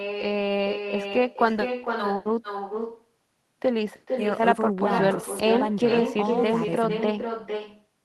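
From start to finish the speech carries an echo with no canceller: the far end is playing the call through a loudspeaker, its microphone captures it, and nothing subtracts it, so the talker returns roughly half a second later, about 7 dB down and thinner. On the waveform each burst of speech has a smaller delayed twin; the spectrogram shows duller copies of every syllable's harmonics trailing at that same fixed offset.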